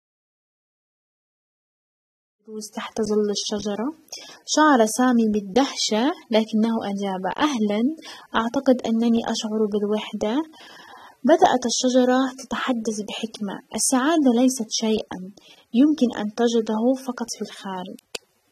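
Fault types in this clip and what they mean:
AAC compression: likely low-bitrate AAC-LC coding, audible throughout the speech as dull, smeared tone with fizzy sibilants; a spectrogram shows a lowered high-frequency cut-off.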